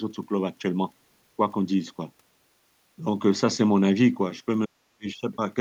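From 4.66 to 5.07 s, speech is suppressed in double talk. The voice sinks by about 40 dB at its deepest and nearly vanishes. The likely cause is an echo canceller mistaking the talker for loudspeaker echo and turning both down.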